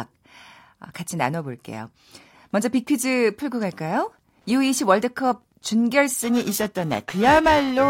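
Speech recording with two distinct interference faults from about 3.5 s onward. From 3.48 s to 6.04 s there is Wi-Fi interference: a steady, faint ticking at roughly ten clicks per second, sitting about 45 dB below the speech. The tick spacing matches a 102.4 ms beacon interval, which points to a nearby Wi-Fi radio whose transmissions are being picked up and rectified by the analogue audio circuitry. From 6.22 s to the end, periodic clock jitter gives the speech a rough, metallic edge. The converter's sampling clock is being modulated at around 1 kHz, so every frequency component in the speech acquires sidebands spaced about 1 kHz above and below it. The sidebands are strongest on the higher-frequency content, which is why sibilants and upper harmonics sound the most affected. Because the artefact rides on the signal itself, it disappears in the pauses between phrases.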